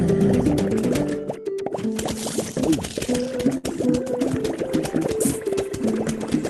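A burst of packet loss runs from 3.57 to 3.65 s. Several consecutive packets never arrived in time, so the receiver filled roughly 60 ms by extending the last decoded sound and fading it down, giving a brief smeared tail rather than silence. When playback picks up again, about 60 ms of the original audio has been skipped, so the sound jumps ahead. Throughout, the top end stops near 12 kHz, which fits an Opus call path running around 20 kbps.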